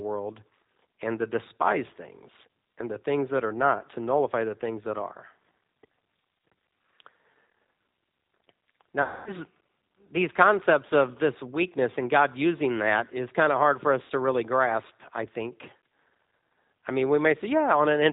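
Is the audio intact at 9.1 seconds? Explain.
No. From 9.02 to 9.31 s, VoIP packet loss concealed by the speech codec stretches the last pitch and filter over about 240 ms of missing audio, giving a buzzy tone or coloured noise that fades. The G.729 codec running throughout at 8 kbit/s also cuts everything above 4 kHz and audibly roughens the speech.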